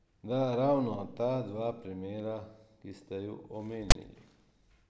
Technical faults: file tags played as audio

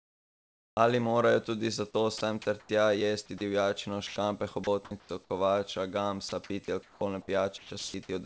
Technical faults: comfort noise in place of the background; sound dropped by the voice detector; sound chopped by the voice detector

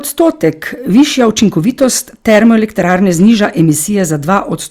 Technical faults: hard clipping

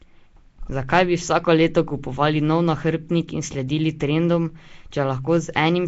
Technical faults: Nellymoser compression

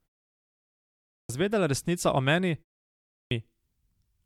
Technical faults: clipped start after a pause

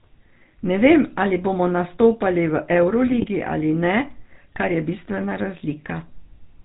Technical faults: GSM full-rate codec; GSM bit errors

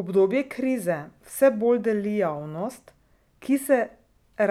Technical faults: none

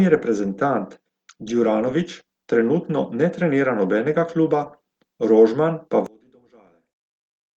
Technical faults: one channel inverted

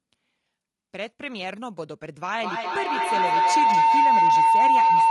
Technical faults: low-delay AAC compression; feedback howl

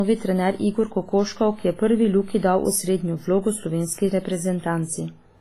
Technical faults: WMA compression

